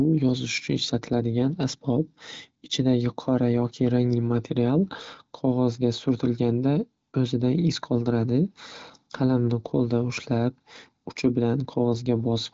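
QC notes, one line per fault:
No faults found.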